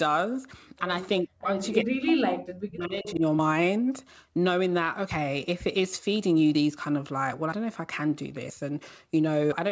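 From 1.23 to 1.49 s, and again from 1.83 to 3.23 s, the speech sinks by as much as roughly 40 dB. This is speech suppressed in double talk, likely an echo canceller mistaking the talker for loudspeaker echo and turning both down.

Between 3.08 and 3.12 s, a brief scrap of voice returns about 370 ms late, some 15 dB under the speech. This is an echo leak, likely where loudspeaker sound slipped past the far side's canceller.

Throughout, nothing sounds above 8 kHz, which fits the call's wideband codec path.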